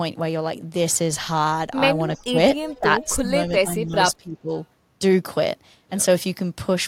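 From 2.18 to 2.38 s the speech drops sharply, by about 20 dB, for roughly a fifth of a second. This is speech suppressed in double talk. The likely cause is both sides talking at once, so the echo canceller turned the near talker down along with the echo. A milder dip of about 10 dB follows from 2.66 to 2.85 s.

Inside that dip, from 2.68 to 2.79 s, a faint delayed copy of the speech is heard. This is an echo leak. It arrives 310 ms late and sits about 20 dB below the speech. It is likely residue the loudspeaker side's echo canceller failed to remove from its loudspeaker pickup. A second short scrap appears at 3.01 to 3.06 s, with the same delay and level.

Suppression returns at 3.2 to 3.29 s, cutting the level by about 15 dB. A longer stretch runs from 3.49 to 4.5 s. There the speech keeps ducking, by about 15 dB at its deepest, for roughly 0.7 s in total.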